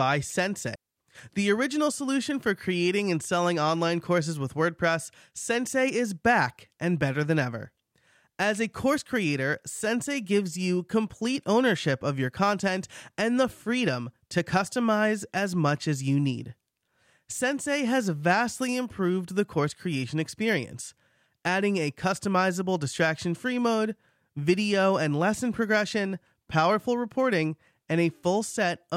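At 0.75 s the speech drops into near silence until 0.97 s, a gap of about 210 ms. This is a digital wireless dropout. The radio link lost too much data, so the receiver muted with a very short fade. No burst of noise surrounds the hole.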